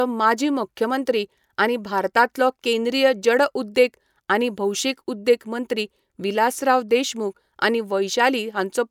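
No technical faults are audible anywhere in this recording.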